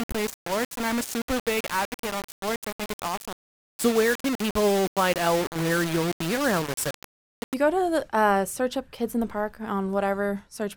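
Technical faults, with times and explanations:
0.00–7.54 s, low bit depth without dither: the sound is coated in a coarse, grainy distortion that swells and shifts with the signal. Quiet passages turn harsh and sputtery, and the softest moments collapse toward silence. The likely cause is requantisation to very few levels, consistent with about 4 bits, rounded with no dither. The error therefore tracks the waveform, sitting only around 10 dB below the signal.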